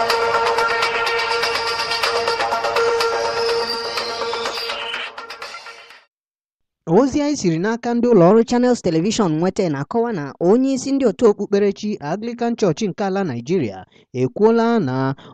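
Audio recorded at 44.1 kHz appears to be played back at 48 kHz without conversion from 8.31 to 11.27 s. This wrong sample rate makes the sound run 1.09 times faster and about 1.5 semitones higher.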